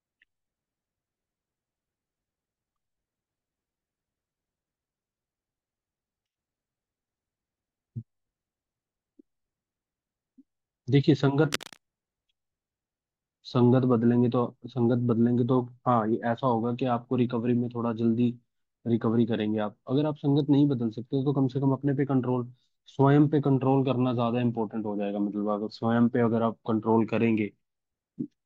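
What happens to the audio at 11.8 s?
Cable scratch noise runs from 11.52 to 11.78 s. A short burst of rough scratching sits over the speech, about 10 dB below it. The likely cause is a worn cable or connector being moved.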